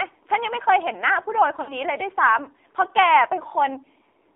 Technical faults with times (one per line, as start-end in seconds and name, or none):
0.00-4.36 AMR narrowband mobile codec
1.62-1.77 lost AMR speech frames